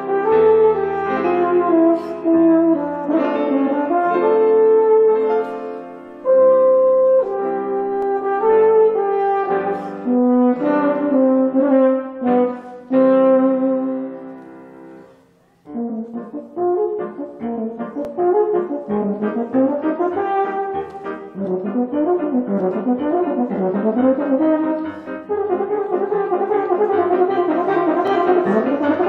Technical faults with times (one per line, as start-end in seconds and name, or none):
8.02-8.05 overlapping chunks
18.05-18.07 overlapping chunks
28.07-28.10 overlapping chunks